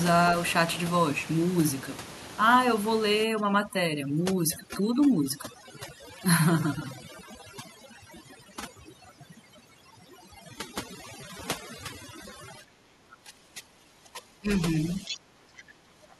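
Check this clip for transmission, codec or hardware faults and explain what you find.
There are three problems here, all in the processing chain rather than the hardware, and they stack up toward the end of this speech clip.

Overdone noise removal kicks in from 3.24 s to the end. The room noise, sitting about 13 dB under the voice, gets clamped hard, so individual frequency bands are switched off along with the quieter parts of the voice. You hear near-silent gaps with little twinkling specks.

Speech suppressed in double talk shows up at 12.6 to 12.78 s, 13.02 to 14.49 s and 14.95 to 16.05 s. The voice sinks by something like 15 dB in those stretches. That's most likely the echo canceller failing to separate the talker from overlapping loudspeaker echo and ducking both.

The other side's voice is leaking through from 15.05 to 15.17 s, a brief scrap of a second voice roughly 10 dB below the talker. 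It's likely loudspeaker playback that the echo canceller didn't fully strip from the microphone, and it lands right inside that last suppressed stretch.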